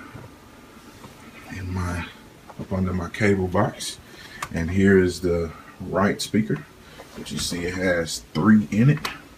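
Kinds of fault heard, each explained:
No faults heard; nothing to report.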